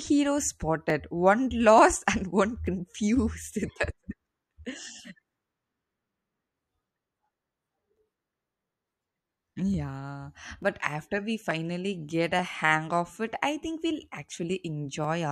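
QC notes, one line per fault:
0.90 to 15.04 s, clock drift buffer slips: two devices are likely running on separate clocks several hundred ppm apart, so the buffer between them fills or drains and drops or repeats a few tens of samples every 0.88 s, heard as a steady click through the speech.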